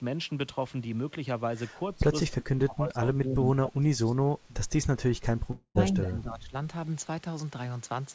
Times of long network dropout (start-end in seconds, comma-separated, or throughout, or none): 5.51-5.78